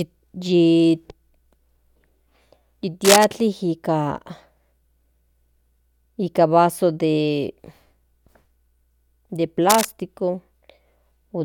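A worn cable, connector or control being disturbed is the likely cause: its contact resistance jumps around rapidly, and that irregular variation lands on the signal as cable scratch noise. The first burst runs from 3.04 to 3.27 s, dense and ragged, roughly as loud as the speech itself. The second, from 9.69 to 9.86 s, is shorter and a little quieter. Both come across as a brief scratching rustle laid over the speech.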